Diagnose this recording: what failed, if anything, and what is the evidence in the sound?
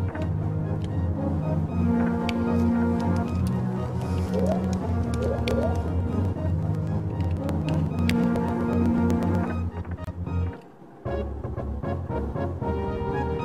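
The driver or buffer stage shows periodic USB or driver dropouts. From 3.28 to 9.48 s, regular ticks sound every 0.124 s, around fifty in all. Each skips roughly a millisecond of audio. A blocking task stalls the bus at a fixed interval.

The codec stage shows a gap at a join of encoded pieces. At 10.04 s the sound stops for 28 ms, then resumes at 10.07 s where it left off. Separately encoded pieces were joined untrimmed. Encoder delay and end padding remain.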